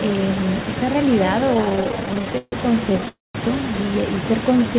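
Speech over a call, with three distinct faults. Throughout, an echo with no canceller trails every phrase by roughly 300 ms at about 12 dB below the direct sound. The far end's loudspeaker output is reaching its microphone and coming back unremoved. The copy is discrete and delayed, not a diffuse tail, which separates it from plain room reverberation. It also sits inside the narrow band of the call path, which stops near 4 kHz, as fits a G.711 codec.

From 1.54 to 2.54 s the audio shows repeated stalls (stutter). There are 23 short gaps, the longest 144 ms, and concealment fills about a third of that second. A second, lighter burst runs from 2.90 to 3.09 s with 5 gaps of at most 11 ms. Each time, the jitter buffer briefly ran dry and the receiver stretched the last sound. The result is a dragging, jerky rhythm rather than lost material.

Straight after, from 3.09 to 3.37 s, comes a call audio freeze. 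The sound is held and fades for 260 ms, about 190 ms of it silent, then resumes exactly where it stopped. That single long hold is what distinguishes it from the stutter. Since nothing is skipped, it is not a dropout, and the likely cause is packets held up in transit.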